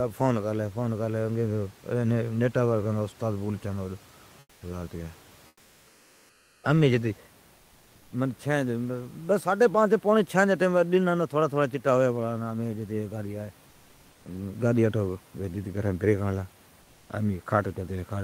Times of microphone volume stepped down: none

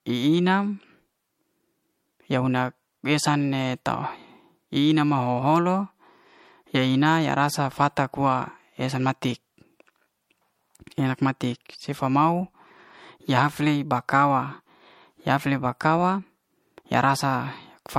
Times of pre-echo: none

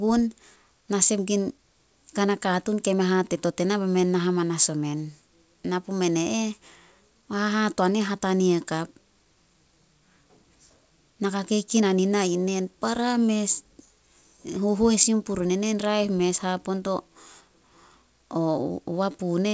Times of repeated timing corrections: 0.08-19.44

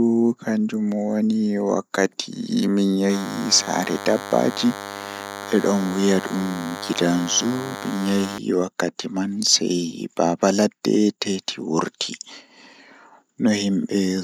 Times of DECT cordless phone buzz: 3.09-8.38

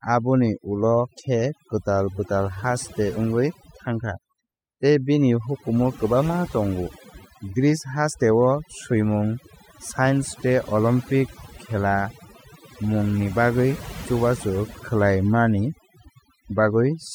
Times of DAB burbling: none

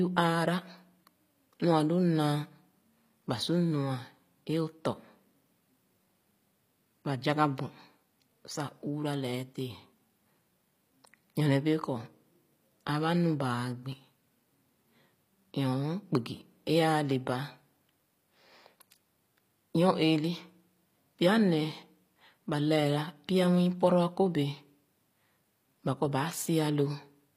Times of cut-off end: none

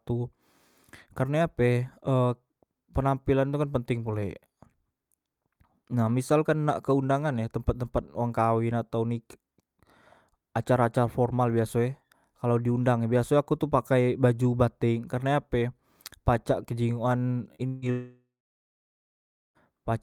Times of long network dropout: 17.67-19.58

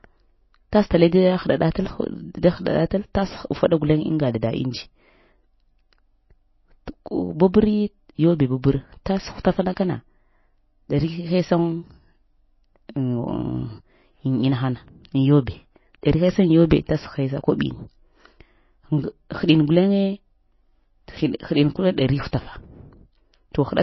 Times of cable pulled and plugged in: none

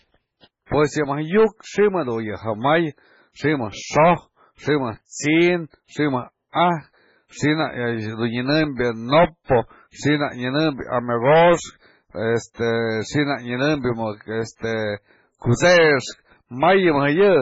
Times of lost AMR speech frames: none

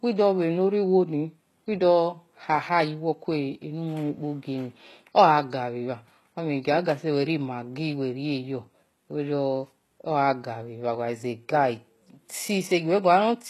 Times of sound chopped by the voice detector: none

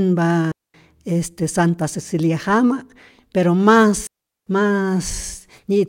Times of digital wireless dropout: 0.52-0.74, 4.07-4.47

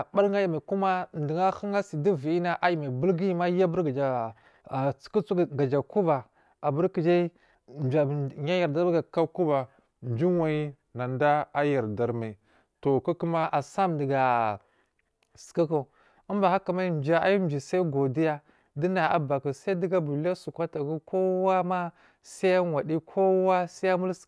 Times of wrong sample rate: 9.17-13.44

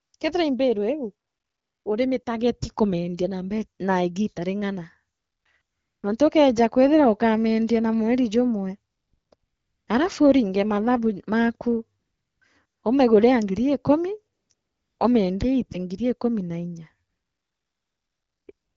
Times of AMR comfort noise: 0.01-0.19, 1.27-1.85, 2.23-2.25, 5.17-6.03, 8.91-9.87, 11.99-12.83, 14.35-14.99, 17.09-18.76

